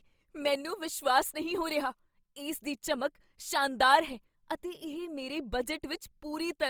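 From start to finish the speech sounds grainy and rough, with a noisy fizz in the upper bands, though the top end still reaches about 20.4 kHz. This is likely Opus compression in its music mode at a low bitrate near 24 kbps, filling starved bands with noise.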